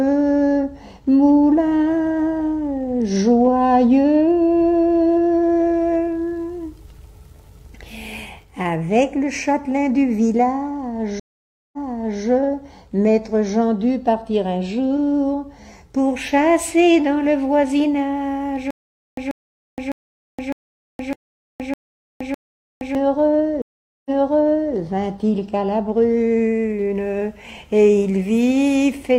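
The audio has two stream reconnect events and one stretch of stutter with silent gaps. At 11.2 s the sound drops out for 533 ms and then resumes about 0.51 s earlier than where it stopped, so a short section is heard twice. The same happens at 23.6 s, with 437 ms of silence and a restart about 0.70 s back. That backward jump after a break is what a dropped connection looks like when the player reconnects, starts a new decoder mid-stream, and the server resends a burst of buffered audio. Between 18.7 s and 22.9 s, a 137 ms fragment plays seven times at a steady 606 ms period, with 469 ms of digital silence after each repeat. The audio that belonged in that interval never arrives. This pattern likely comes from the player stalling, replaying its last buffered fragment on each retry, and then running empty until the next attempt.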